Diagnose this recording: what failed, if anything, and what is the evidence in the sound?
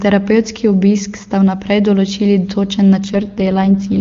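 A network-side AMR rate drop from 3.00 to 4.00 s: the wideband speech turns rough and synthetic, consistent with the link forcing AMR-WB from its top mode down to about 6.6 kbit/s. Unlike packet loss, there is no gap and the band doesn't narrow.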